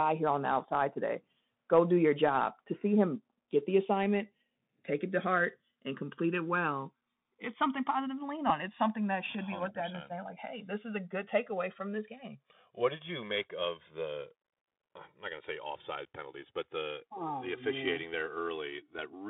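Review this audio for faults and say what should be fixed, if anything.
A slow, sweeping flanging runs through the whole speech clip, with hollow notches gliding through the spectrum when the channels are heard together. This is channels drifting apart: the two sides were captured on separate clocks roughly 150 ppm apart, so their offset grows to about 3 ms by the end. Recording both channels from one device, or locking both devices to a shared clock, would prevent it.

From start to finish the sound is narrow and boxy, confined to roughly 150 Hz to 3.7 kHz. Sibilants are scratchy, loud bright passages break up, and a grainy hiss sits underneath. This is the Bluetooth CVSD headset codec, which fits a 64 kbps link encoding one up-or-down bit per sample with an adaptive step that cannot keep pace with fast, loud changes. Switching the headset to a wideband profile or using a wired microphone would avoid it.

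At 8.49 s there is a brief buzzy tick. This is a Bluetooth headset packet repeated: about 7.5 ms of audio, which fits two lost packets, was filled by decoding the previous packet's bits again, so a short 3.75 ms cycle repeats. Keeping the headset close to the phone, away from interference, would reduce the dropouts.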